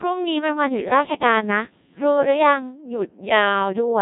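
From start to finish, the speech has passed through a Codec 2 vocoder. The waveform itself is not carried. Only pitch, voicing, energy and a rough spectral envelope survive, and the decoder rebuilds the voice from sine waves. The result is robotic and buzzy, with heavy damage throughout. The coarseness points to a very low rate, around 1.6 kbit/s. Nothing is heard above 3.8 kHz, so the top end sounds dull and closed in.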